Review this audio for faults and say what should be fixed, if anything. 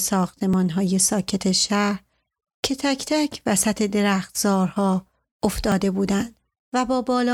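Repeated buffer at 0.54 s and 5.72 s: a tiny slice of the speech replays, once at 0.54 s and twice at 5.72 s, heard as brief clicks rather than stutters. The 1.33 ms segment fits a 64-sample buffer. To prevent it, enlarge the playback buffer or raise audio thread priority so data arrives on time.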